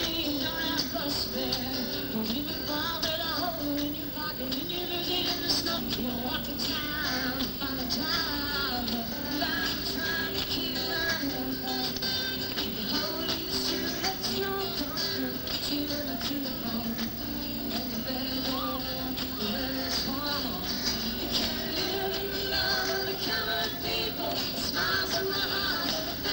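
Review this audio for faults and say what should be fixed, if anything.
At 5.77 s there is a skip ahead: about a second and a half of audio is dropped and playback jumps straight to later material with no gap. On a waveform or spectrogram this shows as an abrupt seam where the envelope and spectral content change discontinuously. Fix it by sizing the jitter buffer to absorb delay swings and time-compressing gradually instead of discarding a block when it overflows.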